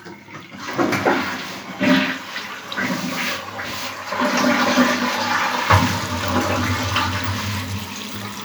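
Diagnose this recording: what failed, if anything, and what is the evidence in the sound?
Nothing failed in this recording, and the sound gives no evidence of any fault at any stage.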